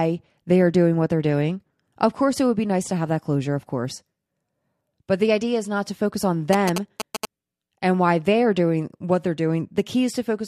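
Speech, interrupted by GSM signalling bursts from 6.53 to 7.25 s, between "not to focus on" and "and why they are". A galloping dit-dit-dit of short buzzes sounds at 217 Hz, about 5 dB below the speech. A nearby 2G phone was signalling. The audio circuit rectified its radio bursts.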